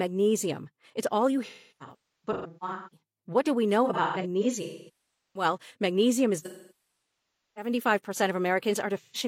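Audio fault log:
1.46–3.00 s, 3.85–5.45 s, 6.39–7.71 s, 8.97–9.17 s: AAC frame loss with concealment in the speech. The first two stretches lose about 1.02 s and 0.85 s in scattered gaps, with the longest runs near a third of a second. The third loses about 1.11 s, and the last about 0.13 s. The decoder rebuilds each gap from the last good spectrum, so the sound smears into a noisy, phasey wash. The longer runs dip and fade back in.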